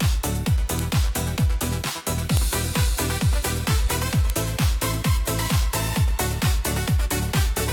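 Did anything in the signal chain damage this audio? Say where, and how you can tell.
Yes. A file header played as audio appears at 4.3 s, a stage fault in storage or file joining. A second WAV piece begins there with its header bytes read as samples, giving one sharp snap. The waveform shows a brief spike, and the spectrogram shows a thin broadband vertical line.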